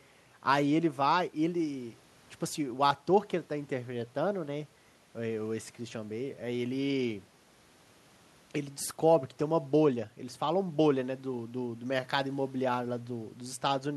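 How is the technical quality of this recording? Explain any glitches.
Nothing here stands out as a technical problem, since the recording runs along without any glitches to point to.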